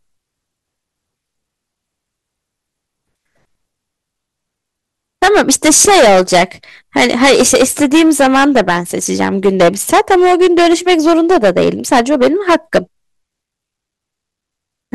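A stage in the signal path was driven about 14 dB past its limit, so speech peaks were sliced flat from 5.23 to 6.43 s and again from 6.96 to 12.78 s. This hard clipping adds high harmonics, giving loud syllables a harsh, crackling fuzz.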